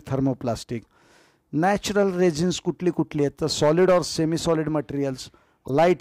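Right near the end, from 5.65 to 5.69 s, there's a short chirpy burst that doesn't belong to the surrounding sound. That's a corrupt frame decoded: some bits in the compressed stream got flipped, and the decoder played the damaged data anyway, so gains and spectral codes came out wrong and energy landed at odd frequencies. It lasts about 45 ms, which fits a few consecutive frames being hit, and it peaks fairly loud, up near -15 dBFS.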